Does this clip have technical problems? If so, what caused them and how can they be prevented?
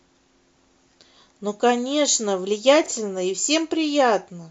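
Yes. Between 2.84 and 2.88 s the speech briefly jumbles: chunks out of order, where one 20 ms chunk arrived one slot late and played after its successor, leaving three hard joins. Prevention: sequence-number chunks and reorder them in a jitter buffer before playback.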